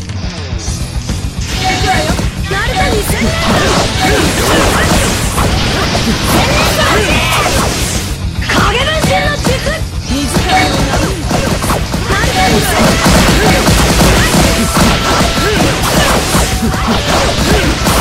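No technical faults can be heard anywhere in this recording.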